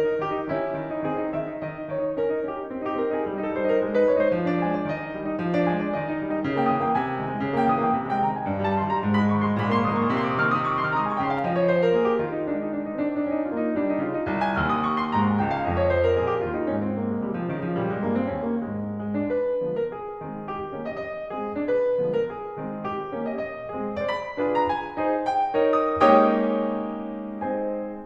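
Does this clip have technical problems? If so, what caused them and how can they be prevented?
Yes. A second, slower capture or misaligned edit likely layered the music onto itself, creating a doubled audio track from 9.59 to 11.39 s: a dry, full-band copy trails about half a second behind, roughly 5 dB quieter, starting and stopping abruptly. Preventing it means monitoring only one capture path and checking edits for duplicated, offset regions.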